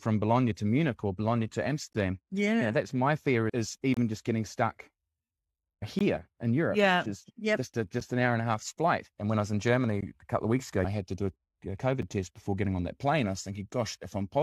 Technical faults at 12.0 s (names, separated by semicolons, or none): gap between stream segments